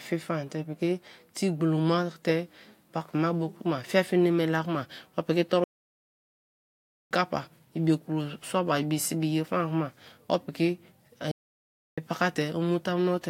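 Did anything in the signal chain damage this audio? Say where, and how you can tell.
Yes, at playback. The speech halts at 5.64 s for 1.47 s and at 11.31 s for 0.66 s, resuming where it stopped. That is a playback stall, likely a starved or blocked player. Unlike packet loss, nothing is skipped, and the gaps are long, clean silences.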